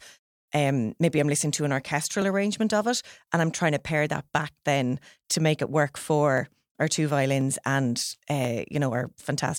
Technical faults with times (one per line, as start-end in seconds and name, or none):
0.14-9.49 clock drift buffer slips